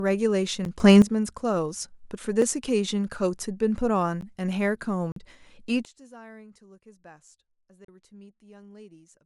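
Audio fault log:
0.65 s, 2.42 s, 4.21 s, 5.12–5.16 s, 7.85–7.88 s: block of digital silence. The output buffer went unfilled in time, so the sound dropped straight to silence, giving ticks at 0.65, 2.42 and 4.21 s and audible holes of about 43 and 36 ms. The 10.7 ms gap fits a 512-sample buffer; the 43 ms gap fits 2048 samples.
0.80–1.02 s, 5.85 s to end: sudden gain jump. A digital gain change was likely applied without a ramp, so the speech and its background noise step up together by about 12 dB for 0.22 s, then from 5.85 s drop abruptly by about 24 dB for the remainder.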